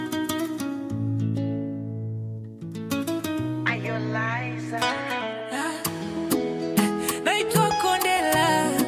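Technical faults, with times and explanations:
Nothing technical stands out here; there's nothing to flag anywhere in the recording.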